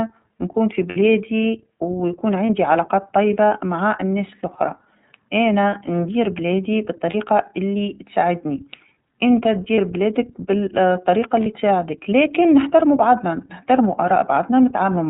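Speech coded throughout with the iLBC codec: nothing above 4 kHz survives, and the voice has a plainly rough, synthetic edge from frame-by-frame excitation coding. The artefact is steady across the clip, with the codec in its 30 ms frame mode at about 13 kbps. Lost iLBC frames occur at 0.89–0.97 s, 2.46–2.50 s, 7.10–7.15 s, 9.75–9.79 s and 11.43–11.47 s. The longest gap of 60 ms suggests two missing frames. In each gap the decoder repeats the last pitch cycle with added noise, giving a brief held, buzzy vowel rather than silence or a click. Unlike concealment in codecs that depend on earlier frames, the voice returns to normal almost immediately after each gap.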